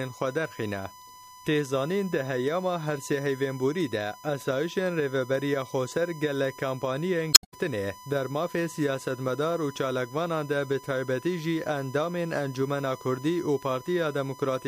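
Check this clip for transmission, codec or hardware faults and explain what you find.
Two faults are present: a steady USB whine and one burst of damaged data in the compressed stream.

The USB whine runs through the whole clip. It is a fixed tone at 1 kHz, and that is also its strongest component. It sits roughly 20 dB below the signal. The USB bus draws current in 1 ms frames. That pulsing leaks into the audio path through shared power or ground. The result is a constant pitched whine under the sound.

The damaged data in the compressed stream occurs from 7.30 to 7.54 s. Some bytes in the stream were corrupted there. The decoder could not read those frames correctly and lost sync. It then hunted for the next valid frame header. This is heard as a short squawk or blip lasting about a quarter of a second. The recovery also adds roughly 10 ms to the timeline at that point.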